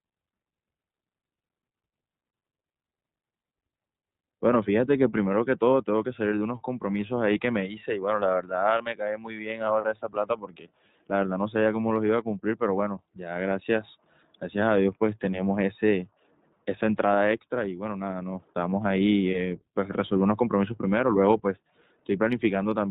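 Throughout the speech, the iLBC codec is plainly audible. Everything above 4 kHz is gone, which leaves the sound narrowband and slightly rough and synthetic. The frame-by-frame excitation coding fits 30 ms frames at 13.33 kbps. A spectrogram would show a hard ceiling at 4 kHz.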